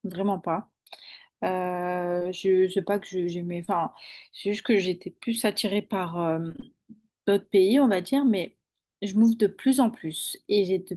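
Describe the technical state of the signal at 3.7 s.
Short concealed packet loss runs from 3.65 to 3.69 s. About 20 ms of audio never arrived, and the receiver covered roughly 19 ms of it by extending the preceding sound before blending back, leaving a brief smear or wobble. It is not a silent dropout, because the hole is filled rather than left empty.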